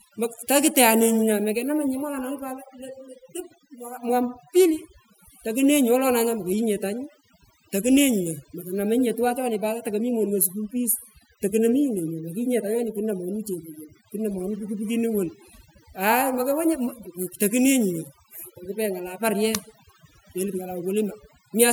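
Overdone noise removal runs throughout this speech recording. A noise reduction stage set too aggressively pulls individual frequency bands down or out whenever they sit close to its noise estimate, so the background drops and breaks up into twinkling specks, while quieter speech components vanish.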